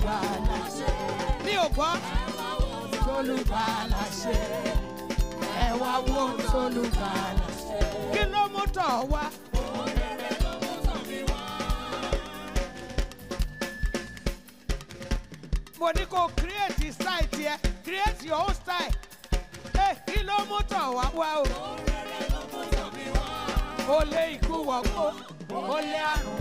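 Periodic USB or driver dropouts run from 0.14 s to 26.16 s: once a second, about a millisecond of sound drops to silence, heard as regular ticks.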